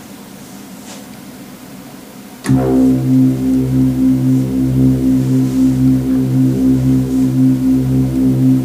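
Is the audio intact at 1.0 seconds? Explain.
Yes, the audio is intact at 1.0 seconds, with no fault audible at that moment.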